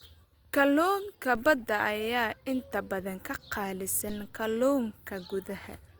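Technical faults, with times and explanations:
1.35 s DC step: the waveform's zero line jumps abruptly, giving a single low thump; the offset then decays, as a 2 Hz high-pass drains it.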